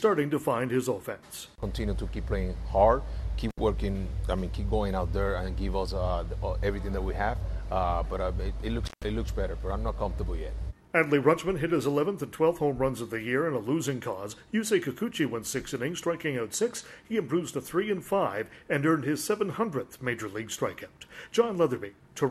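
At 3.49 s and again at 8.85 s, intermittent contact breaks the signal path: a loose plug or cable opens briefly, dropping the sound for about 68 ms and then 142 ms. Each gap has crackle at its edges, with faint hiss filling the open line.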